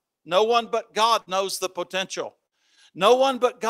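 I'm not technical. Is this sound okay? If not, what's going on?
No. Twice, at 1.21 s right after "one but" and at 2.46 s right after "knows the potential", there's a burst of packet loss. The last sound is stretched and faded for about 50 ms instead of going silent, and then about 60 ms of the speech is skipped.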